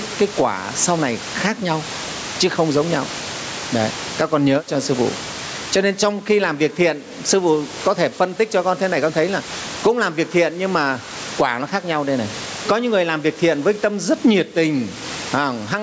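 Throughout the clip, gain pumping pulls the level down by around 20 dB on each loud syllable, likely from excessive gain driving a fast limiter.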